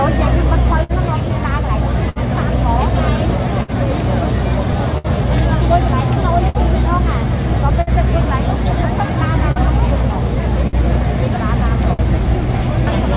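Small, uneven hiccups run through the sound from start to finish, a faint stumble in tempo rather than any single obvious break. This is clock drift between sender and receiver, with the sender's clock running roughly 5 percent slow. Because audio arrives a little slower than it is played out, the receiver's jitter buffer keeps draining and has to be topped up, so the irregularity never settles into a steady rhythm.

Those top-ups are repeated timing corrections, spread from 0.73 s to 13.03 s. Each one repeats a very short slice of what was just heard, and together they add about 50 ms, all in the same direction. The playback speed itself is untouched. What you hear instead is the odd stutter or uneven pacing at irregular spacing, which fits a receiver stretching the stream a little at a time to keep pace with a slow source.

On top of this come scattered short gaps between 0.83 s and 12.02 s: around ten separate holes, the longest about 70 ms, adding up to roughly half a second, or about a twentieth of that stretch. 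Each was patched by carrying the preceding sound forward, so they come across as brief smears or ticks rather than silences.

All of this sits over the narrow call-path sound, with nothing above 4 kHz, which points to G.711 mu-law coding.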